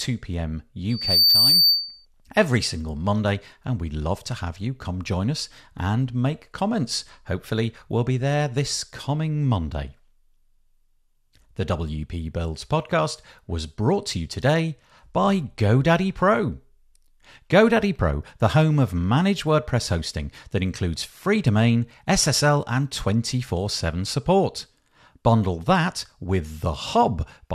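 A speech recording with a loudspeaker feedback squeal from 0.90 to 2.06 s. A single tone near 4.6 kHz swells up within about a third of a second and rides a few decibels above the speech. A microphone is re-amplifying its own loudspeaker until the loop runs away.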